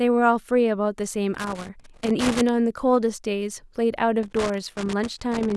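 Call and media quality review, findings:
Loose connector crackle on the speech, 1.34–2.49 s and 4.23 s to the end. Worn or dirty contact making and breaking, chopping the signal into scratchy bursts. Reseat or swap the cable.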